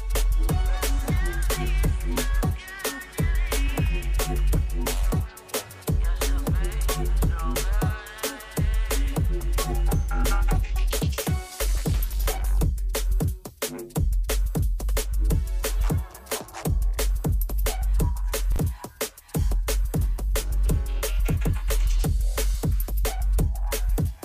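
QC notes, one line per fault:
18.52–18.58 s, chunks out of order: one 20 ms chunk plays two chunks late, after the material that should follow it. Nothing is lost, but the reordered span and its three hard joins produce a brief jumbled stutter.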